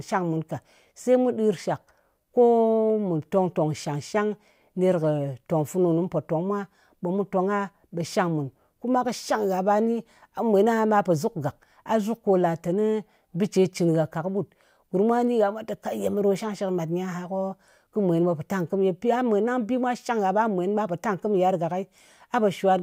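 Nothing here trips up the ear: the speech runs its whole course without a single dropout, glitch or stumble to point at.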